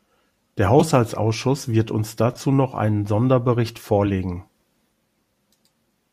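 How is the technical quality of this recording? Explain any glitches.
The speech is marred by three short glitches of the same kind, each a corrupt frame decoded. They occur at 0.79–0.82 s, at 2.33–2.38 s between "wird uns" and "noch einen", and at 4.06–4.10 s. Each spans roughly two or three compressed frames. Flipped bits in those frames were decoded anyway. Misread values sent energy to the wrong frequencies. The result is a brief chirp or noise burst. The first is very loud. The third is moderate. The second is faint.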